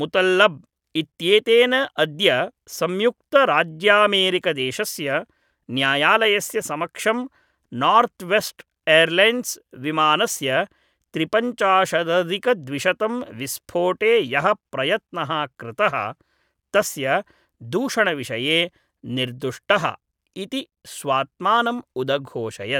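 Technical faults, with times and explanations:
No technical faults audible anywhere in this speech recording.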